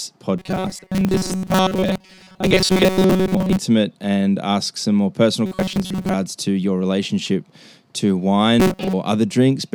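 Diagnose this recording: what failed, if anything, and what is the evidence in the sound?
The audio path likely ran short of fresh samples at the driver or buffer stage, repeating the last short block, about 5.3 ms, in place of audio that never arrived, with most of the signal replaced. The result is robotic sound from repeated short buffers: a rigid, metallic buzz near 188 Hz that loosely tracks the speech, from 0.38 to 3.58 s (ending before "and ask some more"), 5.46 to 6.14 s (before "to your relationship to"), and 8.60 to 8.94 s.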